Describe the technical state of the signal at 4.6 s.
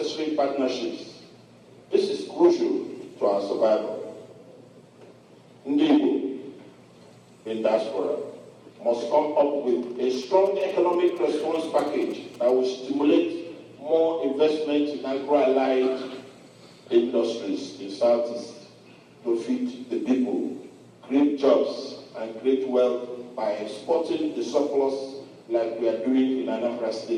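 At 4.6 s the signal is intact, with no dropout, clipping, glitch or other technical fault to be heard.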